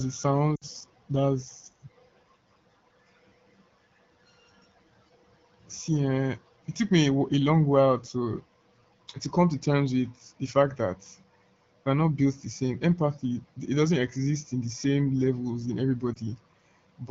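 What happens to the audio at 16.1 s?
Lost AMR speech frames, 16.14 to 16.17 s. The decoder repeats the last good pitch and vocal tract settings at lower gain, giving a brief dip.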